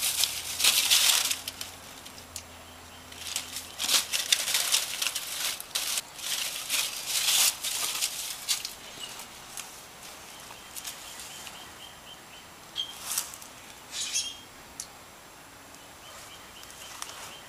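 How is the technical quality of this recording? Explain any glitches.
The recording has two glitches, both chunks out of order. The first runs from 5.5 to 6.0 s, the second from 7.5 to 8.0 s. In each, two 250 ms chunks play swapped, because one arrived one chunk late and was written after its successor. No audio is missing. The order is wrong, though, so the half-second sounds jumbled. There are three hard joins at the chunk edges.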